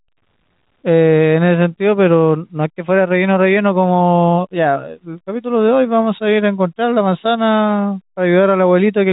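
There are no technical faults to describe in this speech, which comes through the band-limited telephone channel as expected.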